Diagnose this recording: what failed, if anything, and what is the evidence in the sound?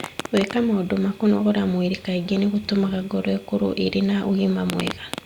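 Nothing failed: no stage of the chain left any audible fault in this recording, so the sound gives no evidence of one.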